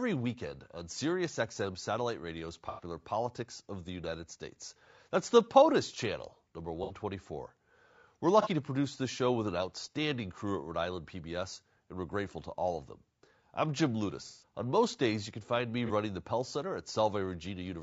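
A speech recording with two kinds of fault. The whole clip has a rough, grainy quality. Noise fills the gaps between the voice's harmonics, and the top band sounds dulled and synthetic. This is likely low-delay AAC compression, such as AAC-ELD, at a low bitrate around 32 kbps. Its short frames cannot separate the harmonics cleanly, and the bits run thin. On top of that there is AAC frame loss with concealment, five times. Each time the decoder lost data and filled the gap from the last good spectrum, so the sound smears into a brief noisy, phasey patch. The first runs from 2.69 to 2.83 s, about 90 ms. The second is 6.83 to 6.92 s, right after "channel number", about 60 ms. The third is 8.42 to 8.47 s, just before "to produce this show", about 30 ms. The longest is 14.27 to 14.43 s, about 150 ms. The last is 15.86 to 15.91 s, after "you can find me", about 30 ms. These lengths fit whole 30 ms frames going missing.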